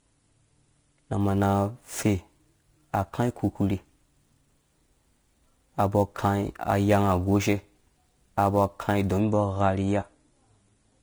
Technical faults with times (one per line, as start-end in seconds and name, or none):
0.00-11.02 Vorbis compression
1.20-9.20 sample clock jitter